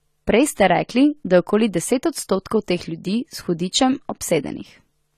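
From start to end the speech sounds dull and smeared, with nothing above 14 kHz and a warbling, fizzy texture on sibilants and held vowels. The likely cause is AAC compression, plainly audible here, which fits AAC-LC at around 32 kbps.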